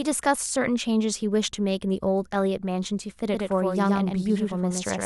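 Speech, with a doubled audio track from 3.33 s to the end: a full-band copy trails roughly a tenth of a second behind, about 5 dB quieter, likely from a second, slower capture path. Unlike an echo or reverb, the copy starts abruptly and carries no decay or room colour.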